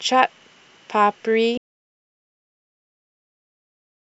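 The input feed was most likely lost, perhaps through a disconnection or stray mute, while the recorder kept writing silence. An audio dropout to silence follows at 1.58 s: the speech cuts off mid-flow and total silence, with no room tone, runs to the end.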